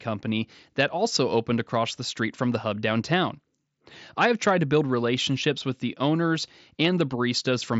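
Nothing stood out on listening to this speech recording, which comes over a Bluetooth mSBC headset link with its bandwidth topping out just under 8 kHz.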